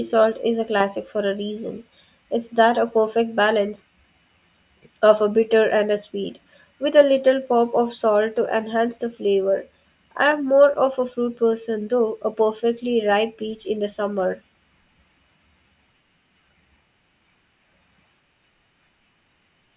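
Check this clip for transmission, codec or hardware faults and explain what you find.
Nothing stood out on listening to this speech recording.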